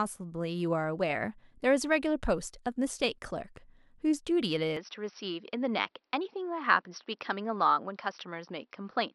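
From 4.77 s to the end, the speech turns duller with nothing above 5.8 kHz. No gap occurs at the switch, and the level holds steady. Likely the input switched to a poorer device.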